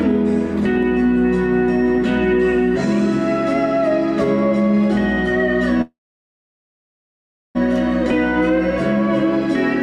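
A call audio freeze runs from 5.81 to 7.57 s: the sound stalls into a brief fading buzz, then about 1.6 s of silence, and resumes where it stopped with nothing lost, now 1.7 s late. Delayed packets likely drained the jitter buffer.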